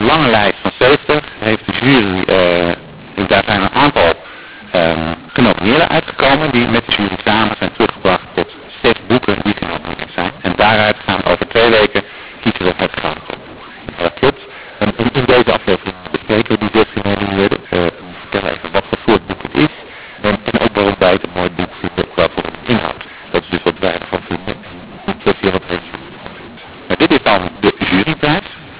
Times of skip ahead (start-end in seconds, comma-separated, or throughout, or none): none